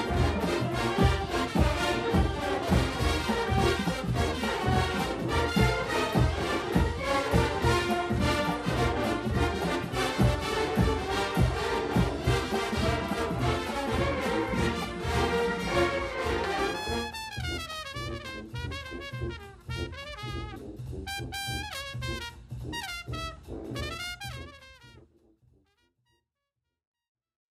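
Nothing here sounds wrong at all; the sound just eases out with a smooth, deliberate fade that begins around 24 s and has fully settled by 27.5 s.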